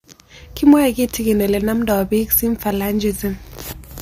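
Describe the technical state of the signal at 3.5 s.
At 3.5 s the speech signal is intact, with no dropout, distortion, glitch or other fault audible at that moment.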